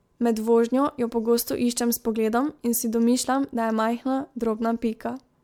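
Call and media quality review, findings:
Generation loss, whole clip: swirly, smeared, hollow speech with blurred attacks, beyond what a single 128 kbit/s MP3 pass explains. Likely repeated MP3 decode/re-encode, around seven passes, each requantising on a shifted frame grid. Nothing above 19.9 kHz.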